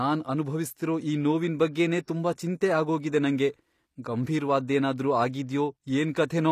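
Across the whole clip the speech carries plainly audible HE-AAC compression, most likely from a low-rate stream of around 24 kbps. The s sounds come out gritty and lispy, and nothing is present above 15 kHz. Unlike a plain low-pass filter, which would just dull the top end, the highs here are rebuilt by spectral band replication, copied up from lower bands, so their harmonics fail to line up with the speech below.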